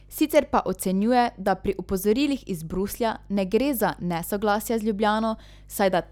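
Speech runs over a steady mains hum at 50 Hz, about 25 dB below the voice, throughout. A ground loop or nearby transformer is coupling power-line current into the signal.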